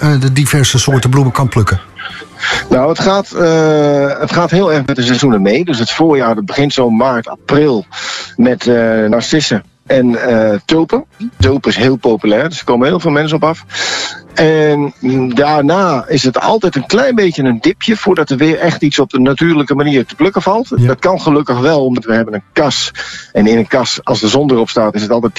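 At 9.12 s and again at 21.97 s, compressed frames are skipped: about 50 ms of audio drops out, which fits two lost 26.1 ms frames. Each join is a short smeared blip, shown as a brief vertical smudge.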